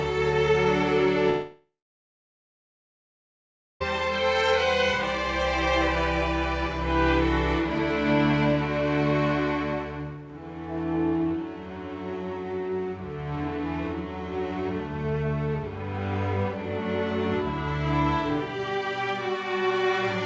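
From 1.30 to 3.82 s the sound cuts out. A short fading buzz gives way to about 2.1 s of silence, likely a long network dropout losing 2.5 s.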